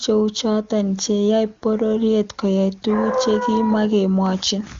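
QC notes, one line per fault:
No faults found; the speech carries the band limit of an AMR wideband (HD Voice) path, with nothing above 7.2 kHz, and any trace of the coding is faint at most.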